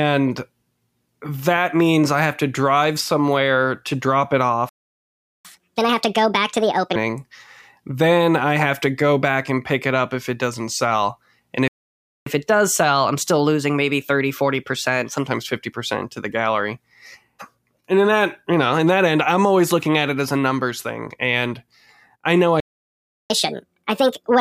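At 4.69 s the speech cuts out mid-flow and the output stays silent for about 0.75 s, until 5.45 s. This is a playback stall, likely caused by the player running out of buffered data or its audio thread being blocked. When sound returns, it picks up where it stopped. The same silence recurs from 11.68 to 12.26 s, about 0.58 s, and from 22.60 to 23.30 s, about 0.70 s, each a stall with the same likely cause.

Each stall is followed by catch-up at higher speed: the speech runs fast and sounds raised in pitch while the player resamples its backlog to regain lost time. From 5.45 to 6.96 s it plays at 1.5 times normal speed, lifting the pitch by roughly seven semitones, before settling back. After the second stall the catch-up is gentler, 1.1 times speed from 12.26 to 15.26 s, with pitch only about a semitone and a half high. The last one, from 23.30 s to the end, returns to 1.5 times speed and the same steep pitch rise.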